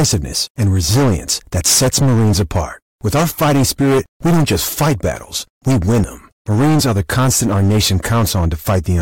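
From the first moment to the end, the speech is hit by hard clipping. The signal is driven roughly 15 dB beyond what the stage can pass, so around a fifth of all samples are sheared off, leaving every loud syllable with a harsh, buzzing fuzz rather than occasional crackle. On the waveform the peaks form flat plateaus. A spectrogram shows smeared harmonic energy reaching high up the spectrum wherever the speech is loud.

At 6.04 s a brief glitch cuts through, caused by damaged data in a compressed stream. A corrupted stretch made the decoder misread its frames and lose sync until it found a valid frame header again. The waveform shows a short discontinuity there. On a spectrogram it appears as a thin vertical disruption that breaks the normal speech pattern.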